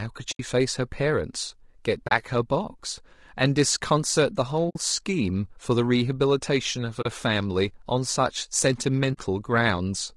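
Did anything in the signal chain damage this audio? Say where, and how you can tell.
Yes. At the codec stage, the speech sounds rough and grainy for the whole clip. Noise fills the gaps between the voice harmonics and the top band sounds thin and synthetic. This points to low-delay AAC compression, likely AAC-ELD running at a low rate of about 32 kbps. Its short frames resolve pitch harmonics poorly, so at that rate there are not enough bits left to code the spectrum cleanly.

In the network or transport stage there are five short, soft-edged dropouts: 0.31 to 0.40 s, 2.07 to 2.12 s, 4.69 to 4.76 s, 7.01 to 7.06 s and 9.13 to 9.18 s. Each lasts between 40 and 80 ms. This is AAC frame loss with muting. Whole codec frames went missing and the decoder filled them with silence. The overlapping synthesis windows fade the audio out and back in around each hole.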